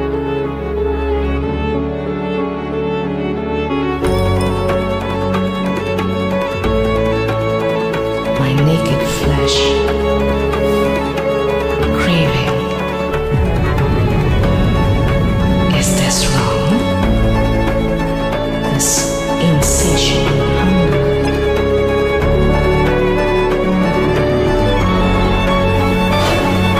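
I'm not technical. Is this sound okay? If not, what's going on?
No. At about 21.25 to 21.29 s there is a brief chirp, squeak or burst of noise, a corrupt frame decoded. Inside the compressed file, a couple of small chunks of data were damaged, and the player played them anyway. The garbled numbers put sound at the wrong pitches, so you hear a short squeak or burst of noise lasting only a few hundredths of a second. A dropout would leave a gap of silence. Here something extra and wrong is added in its place.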